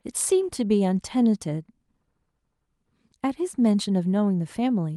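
No technical faults can be heard anywhere in the speech.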